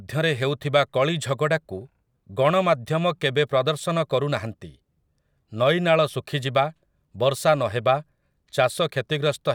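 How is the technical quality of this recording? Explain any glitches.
No technical faults are audible.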